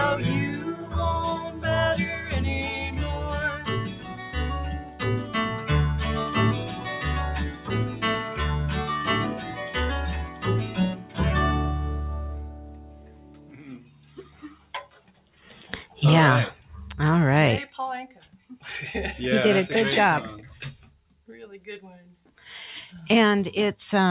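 A speech-tuned noise suppressor stayed active on non-speech material for the whole clip. It treats sustained tones and decays as noise, so the level swings by around 10 dB as attacks pass and held sound sinks, giving a pumping, thinning character.

The suppressor cut sound harder at 0.59–1.64 s, 3.89–5.34 s, 6.77–8.02 s, 9.35–11.18 s, 12.45–15.45 s, 18.26–18.48 s and 20.78–22.37 s. The dips reach about 6 to 7 dB, and tails fade early. The longest stretch is the one around 12.45 s, lasting roughly three seconds. Throughout, the audio stops at 4 kHz, which fits a narrowband call codec such as G.711 A-law.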